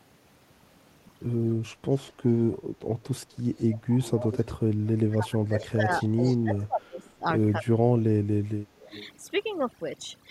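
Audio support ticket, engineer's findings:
Background dropped across the whole clip, breaking up into twinkling specks in the gaps. Overdone noise removal: suppressor set too strong, cutting individual frequency bands near its noise estimate and taking quiet speech detail with them.

Delayed ghost copy of the speech, about 258 ms behind and roughly 15 to 20 dB down, at 4.01–4.53 s, 5.45–5.66 s, 6.01–6.63 s and 8.79–9.08 s. Echo leak, likely from an incomplete echo canceller on a far-end loudspeaker path returning residual signal.

Loudspeaker-side speech dipping and breaking up at 4.81–7.25 s and 7.59–8.91 s, about 1.5 s and 1 s affected. Drops around 20 dB, then nearer 30 dB. Speech suppressed in double talk, likely the echo canceller attenuating both talkers when unable to separate them.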